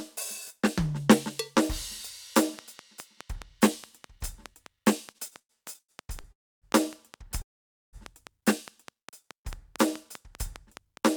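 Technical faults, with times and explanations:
2.38 to 11.16 s, train of clicks: a regular ticking at about 4.9 clicks per second, each click standing well above the music and continuing into quieter moments through to the end. The steady pace of identical pulses is likely due to interference or a faulty connection or power supply.
5.11 to 6.27 s, repeated stalls (stutter): the music halts eight times, with the longest hold lasting 102 ms. About 325 ms in total, 28% of this stretch, is filled by stretching the last sound while late packets leave the jitter buffer empty. Nothing is lost, but the flow drags and stumbles.
6.32 to 6.65 s and 7.42 to 7.96 s, call audio freeze: the music stops for 300 ms and then 510 ms, and almost all of each gap is silent. It then resumes exactly where it left off, likely because packets were held up and the jitter buffer ran dry, so each freeze adds that much delay.
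9.23 to 9.88 s, jitter buffer slow-down: the music plays at about 94% speed with its pitch unchanged, and sustained sounds are drawn out. Repeating small stretches of the waveform adds 42 ms, which rebuilds the buffer's reserve.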